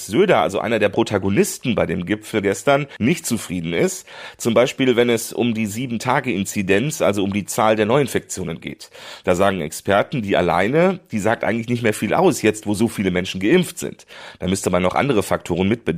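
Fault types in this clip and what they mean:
Crude rate conversion: from about 0.94 to 3.27 s the speech picks up a gritty, inharmonic fizz riding on the louder and brighter parts. It sounds like someone resampled with plain linear interpolation and no anti-aliasing filter, which fits a jump from 44.1 kHz to 48 kHz. The leftover error tones are shifted, inharmonic copies of the voice and sit at roughly 35 dB below the signal.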